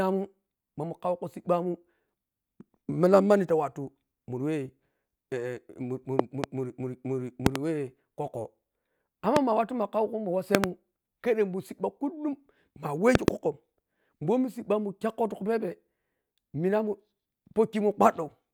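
Speech, interrupted by five loud pops. Each is a sharp click or thump about 20 to 25 dB above the voice, which carries on underneath. Double pops land at 6.19–6.46 s, 7.46–7.58 s, 10.55–10.66 s (just before "khedhemun sibba kullum") and 13.15–13.30 s. A single pop sits at 9.36–9.39 s. The likely cause is a sudden voltage step or spike, such as a plug, switch, static discharge or driver glitch, added to the signal chain.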